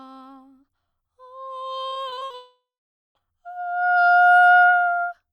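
From 1.89 to 2.35 s the music breaks up with repeated packet loss, giving a choppy, robotic sound. Seven short gaps, the longest 50 ms, are patched by repeating the last sound. From 2.35 to 3.21 s comes what is likely a long network dropout. The sound fades to silence for about half a second, then resumes with that stretch missing.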